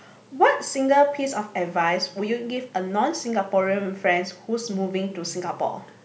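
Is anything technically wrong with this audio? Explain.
No, nothing is technically wrong.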